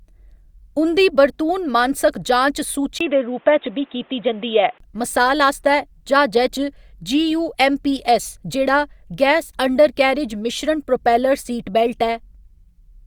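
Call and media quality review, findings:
Speech turns dull and boxy 2.99–4.80 s, after "मानसक जांच", clearing before "मसाल आस्तै". Nothing above 3.8 kHz, 20 ms gap at the switch, different hiss about 35 dB down, level unchanged. Likely input switched to a poorer device. Unlike a codec bandwidth drop, there is a gap and a changed noise floor.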